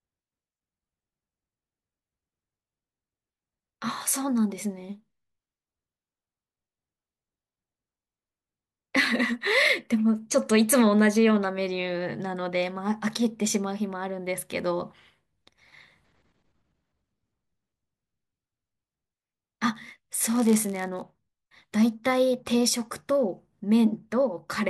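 From 19.73 to 21.03 s the speech carries a block size mismatch (padded): each block arrives slightly short and is zero-filled, so a brief gap recurs at 91.5 Hz, heard as a buzz. The audio runs at 0.996 speed, with the timbre unchanged.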